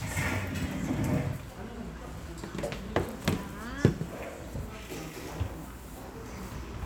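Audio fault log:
No fault is found in the audio.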